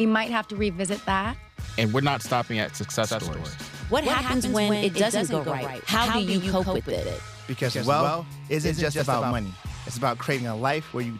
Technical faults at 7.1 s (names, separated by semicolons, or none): doubled audio track